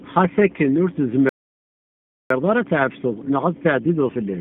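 Throughout, the speech carries G.729 codec damage: rough, slightly synthetic tone, which fits an 8 kbit/s G.729A stream, with a spectrogram showing nothing above about 3.5 kHz. At 1.29 s, just after "akken ur", a playback stall leaves about one second of flat silence in the waveform until 2.30 s, likely from the player running out of data. From 2.30 s to the end, time-compressed catch-up hurries the speech at about 1.25 times speed, keeping normal pitch.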